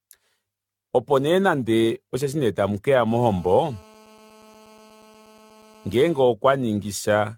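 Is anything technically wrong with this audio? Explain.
Yes. Throughout, the speech sounds swirly, smeared and hollow, with blurred attacks and nothing above 17 kHz. This is likely generation loss from roughly fifteen rounds of lossy re-encoding, consistent with AAC at around 96 kbit/s.

From 3.07 to 6.22 s, a hard, raspy, steady buzz sits about 28 dB below the speech. This is GSM phone buzz: a nearby phone on a call pulses at 217 Hz, and the audio circuit rectifies those bursts.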